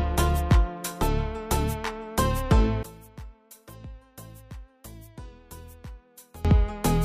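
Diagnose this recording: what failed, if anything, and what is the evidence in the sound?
One channel inverted, likely a swapped analogue wire: from 2.83 to 6.45 s, centred content cancels in mono, falling about 22 dB to a faint residue.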